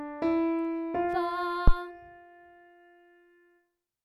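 A phantom power thump sits in this short audio clip from 1.68 to 1.74 s. It is a deep, low thud peaking at about -8 dBFS that dies away within roughly 15 ms. It comes from a supply being switched on a live input, with the voltage step passing through the coupling capacitors. Unlike a handling bump or a plosive, it is a single clean electrical pulse with no rumble or breath noise.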